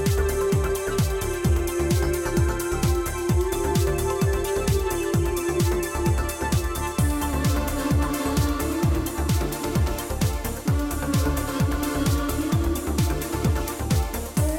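There are no technical faults to describe in this audio.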